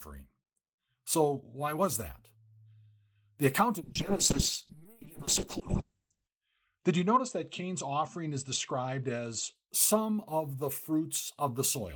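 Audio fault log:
3.82–9.61 s, call bitrate drop: the encoder is starved of bits, so the sound turns rough and muffled above about 8 kHz, which fits a fall from 32 to 6 kbps, recovering before "some of the".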